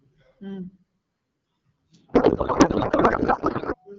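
Codec payload misread from 2.13 to 3.75 s: the speech collapses into garbled, warbling noise, which fits octet-aligned AMR frames being unpacked as bandwidth-efficient, shifting every field.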